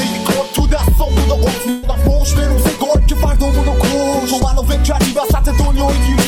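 At 1.69 s the sound smears into a short stretched tail that fades over about 134 ms, ending at 1.85 s. The audio then picks up further along, as if a small piece had been skipped. This is a burst of packet loss: several consecutive packets of about 140 ms of audio never arrived in time. The receiver covered the gap by extending and attenuating the last good sound, then jumped ahead when data resumed.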